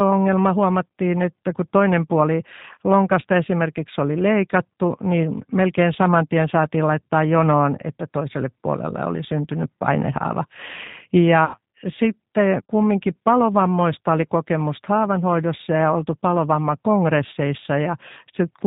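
Throughout, the G.729 codec damage is plainly audible: speech sounds rough and synthetic with nothing above 4 kHz, which fits an 8 kbit/s CELP encoding rather than simple band-limiting.

From 11.45 to 11.58 s, VoIP packet loss concealed by the speech codec stretches the sound into a buzzy tone or coloured noise that fades, instead of leaving a silent gap. Roughly 90 ms is missing, and the speech stays weak briefly after it returns.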